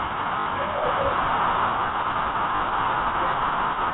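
Packet loss with last packet repeated hits this telephone-band speech at 0.40 to 0.46 s and 2.56 to 2.60 s: the receiver replayed its final good packet across 60 ms and then 40 ms gaps, so each run briefly buzzes, which fits 20 ms packets.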